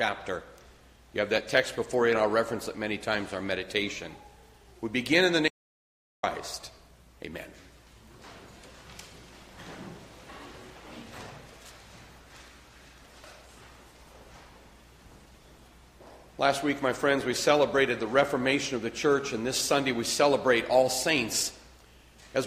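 At 5.48 s the input was likely lost, through a dropped link or stray mute, while the recorder kept writing silence. This audio dropout to silence lasts 0.75 s, to 6.23 s. The sound cuts off mid-flow, the gap holds no room tone, and whatever occurred is gone.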